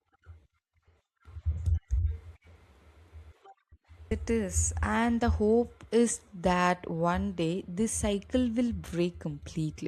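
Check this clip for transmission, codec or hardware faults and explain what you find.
One fault stands out in this speech clip: a stream segment skipped at 4.11 s. The sound jumps abruptly forward with a brief blip, likely because one chunk of a segmented stream failed to load and playback resumed from the next. On a waveform, the envelope breaks discontinuously; a spectrogram shows a thin vertical broadband click where the content changes.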